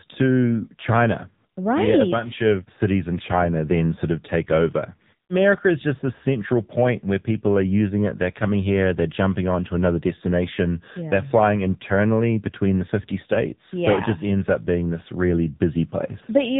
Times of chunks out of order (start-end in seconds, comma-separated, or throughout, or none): none